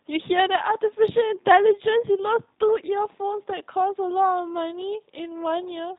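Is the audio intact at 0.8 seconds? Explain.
No. At 0.8 s the speech sounds rough, buzzy and muffled, with nothing above 4 kHz, which fits the G.729 codec's low-rate model-based rebuild, present throughout.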